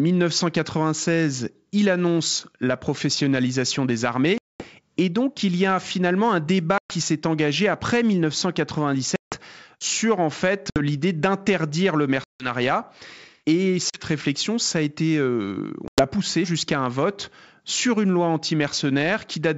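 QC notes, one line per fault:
4.38–4.67, 6.78–6.92, 9.16–9.36, 10.70–10.80, 12.24–12.48, 13.90–14.03, 15.88–16.07 s: packet loss on an ADPCM call. Each time, the audio drops into an abrupt silent gap of 40 to 220 ms, then returns slightly distorted, for instance just before "sur en fait" and before "poussée jusqu'à un vote". Lost packets were filled with silence, leaving the decoder's adaptive predictor and step size mismatched with the sender's until they resynchronise over the following tens of milliseconds.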